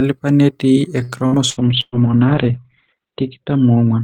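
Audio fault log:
1.03–1.95 s, repeated packet loss (robotic sound): Four holes break the speech, the longest 119 ms, and about a third of the span is stretched repeats of the preceding sound. It comes across choppy. The spectrogram shows smeared, repeated harmonic slices and brief dropouts; the waveform shows periodic copied segments.
1.59 s to end, call bitrate drop: The encoder rate falls from 40 to 7 kbps, bottoming out for about 1.5 s. Coarser coding makes the speech rough and watery. Bandwidth shrinks from 20 kHz to 4 kHz, so the spectrogram shows everything above 4 kHz going dark, and the speech sounds muffled.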